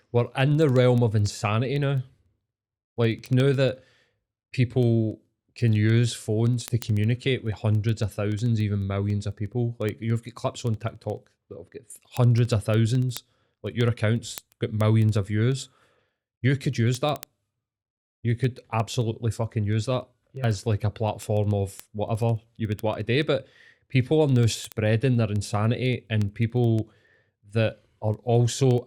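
From 0.12 s to 28.85 s the speech carries word clock ticks: sharp clicks at a steady rate of roughly one every 70 ms, several hundred in all, with uneven strength. The receiving device runs on its own clock, which drifts from the sender's by a few hundred parts per million, so each slip drops or repeats a single sample. On a spectrogram these show as evenly spaced thin vertical broadband lines. The waveform shows tiny one-sample steps or spikes.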